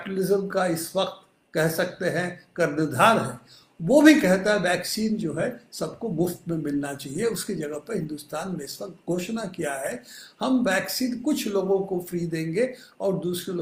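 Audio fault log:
No faults were detected; the signal stays continuous and intact, with unbroken timing throughout the clip.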